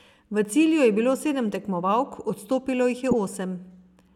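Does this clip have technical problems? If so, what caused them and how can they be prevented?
Yes. Damaged data in a compressed stream causes a brief blip at 3.11 s. Corrupted bytes make the decoder lose sync and resync. Verify transfers with checksums to prevent it.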